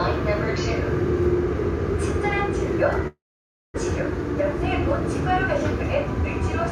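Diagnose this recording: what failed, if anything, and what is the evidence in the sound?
The network stage likely failed: a long network dropout left the receiver with no packets from 3.07 s to 3.78 s. Concealment stretched the last sound into a fading buzz before settling into about 570 ms of silence, roughly 690 ms of filler in all. When audio resumes at 3.78 s, about 600 ms of the original is simply gone, and the timing lands around 70 ms off from before, as the jitter buffer re-synchronises.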